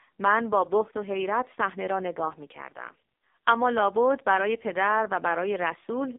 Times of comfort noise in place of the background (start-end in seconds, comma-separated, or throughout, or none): none